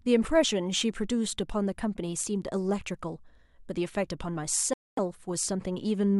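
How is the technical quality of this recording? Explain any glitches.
The recording has one clear glitch, a dropout near the end of the speech. From 4.74 to 4.99 s the sound cuts to about 240 ms of silence and then resumes. This is most likely a Bluetooth stall: interference delayed the wireless packets, the headphones' buffer emptied, and playback paused until retransmitted data arrived. On a waveform it appears as a flat gap in the signal. On a spectrogram it is a blank vertical band with abrupt edges on both sides.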